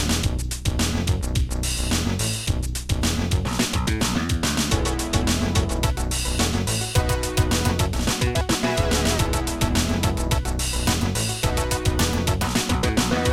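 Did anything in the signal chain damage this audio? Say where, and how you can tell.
No, nothing in the signal chain damaged this audio.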